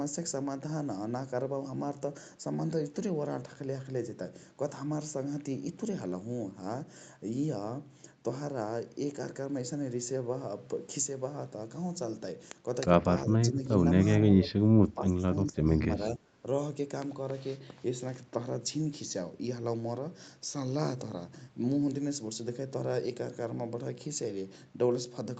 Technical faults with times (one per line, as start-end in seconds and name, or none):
13.51-13.62 speech suppressed in double talk
14.31-15.79 speech suppressed in double talk
16.15-16.44 speech suppressed in double talk